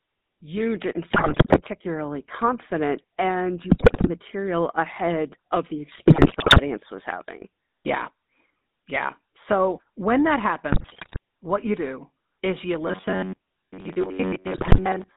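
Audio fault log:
throughout: GSM full-rate codec. The speech has a buzzy, gravelly roughness that is plainly audible. The codec models the vocal tract as a filter and drives it with a pulse train, keeping only every third excitation sample. That coarse excitation is the source of the grit. The band runs from about 200 Hz to 3.7 kHz, so the speech is thin and muffled at the top. All of this fits the 13 kbps full-rate GSM codec.
1.1–1.61 s, 3.7–4.09 s, 5.92–6.6 s, 10.72–11.18 s, 14.54–14.79 s: GSM bit errors. In each span the speech breaks into squawks, pops and gargling. Flipped bits reach the decoder, at error rates between about 4.5 and 7.8 percent. Corrupted filter values bend the spectrum. Bad pitch values jolt the buzz, and bad gain values make the level jump. The worst spans are at 3.7 s and 14.54 s. The last one sits inside the robotic stretch.
12.87–15.17 s: robotic sound from repeated short buffers. 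The speech turns into a rigid, metallic buzz at about 94 Hz. It still roughly follows the syllables. The likely cause is that new audio arrives too seldom, so the player keeps repeating its last short block while the real audio is skipped. Most of this stretch is filled with repeats. The fixed pitch fits a repeated block of about 10.7 ms.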